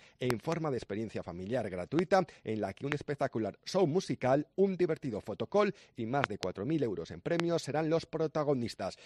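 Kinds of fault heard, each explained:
Loud pop: sharp pops standing well above the sound, which carries on underneath, heard as a close pair from 0.30 to 0.54 s, single pops near 2.0, 2.92 and 7.40 s, and another pair from 6.24 to 6.45 s, each peaking around 20 dB or a little more over the surrounding level. The likely cause is a sudden voltage step or pulse, from a plug, switch, static discharge or driver glitch, added to the signal.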